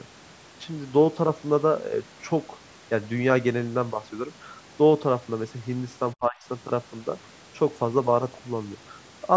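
From 6.14 to 6.39 s the speech abruptly sinks, falling by around 25 dB at its deepest. Roughly a fifth of a second of it is pulled down before the level recovers. This is speech suppressed in double talk, likely caused by the echo canceller of the call processing mistaking the talker for loudspeaker echo while the far side was also speaking, and so attenuating everything at once.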